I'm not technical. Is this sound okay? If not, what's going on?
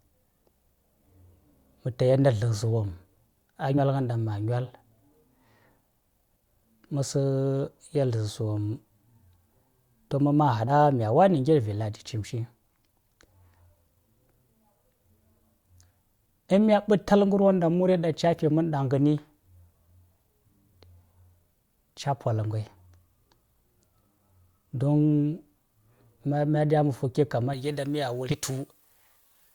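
No. Three times, the playback lost a few pieces of the compressed speech file, a fault called compressed frames skipped. The speech jumps ahead: a fraction of a second vanishes at 3.77 s, 10.67 to 10.72 s, and 28.29 to 28.32 s.

From 27.53 s to the end, pre-emphasis was left on: a treble boost added for recording was never undone, so the speech turns thin, harsh and hissy on s-sounds.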